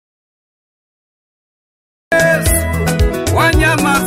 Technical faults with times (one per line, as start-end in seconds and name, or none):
0.00-2.12 audio dropout to silence